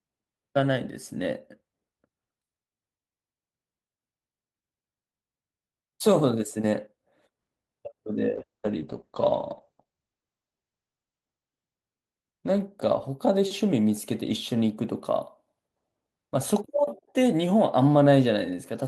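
From 8.4 s to 13.75 s a call bitrate drop cuts the encoder from 40 kbps to 11 kbps, staying lowest for 2.99 s. The speech turns coarse and muffled. On a spectrogram, energy above 8 kHz vanishes, then the full 20 kHz band returns.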